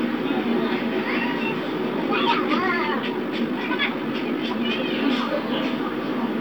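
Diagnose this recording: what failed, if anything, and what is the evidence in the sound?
A time-stretched section runs from 1.88 s to 4.88 s, where the audio suddenly moves at twice its normal pace and turns rushed while its pitch stays put. That points to a software processing stage, likely a time-stretch that compressed the material by dropping short slices to fit a shorter slot. The steady pitch rules out a sample-rate mismatch or a tape-speed fault, which would raise pitch along with the speed.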